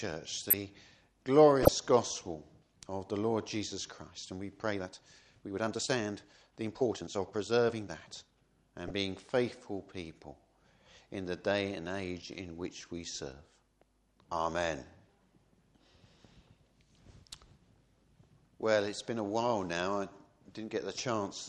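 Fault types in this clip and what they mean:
Corrupt frame decoded: damaged compressed frames were played as received, giving short bursts of misplaced energy near 0.5, 1.6, 8.9 and 21.0 s, the first spanning several frames.
Time-stretched section: from 4.58 to 8.46 s the sound runs about 1.37 times faster at unchanged pitch, rushed, likely from software fitting it to a shorter length.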